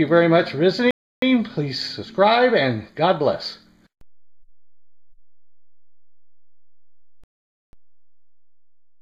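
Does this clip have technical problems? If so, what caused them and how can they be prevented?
Yes. The sound drops to silence from 0.91 to 1.22 s and again from 7.24 to 7.73 s, then picks up exactly where it stopped. These are rebuffering stalls: playback exhausted its downloaded audio and waited, adding 0.31 s and 0.49 s. A larger playback buffer or adaptive bitrate switching would prevent them.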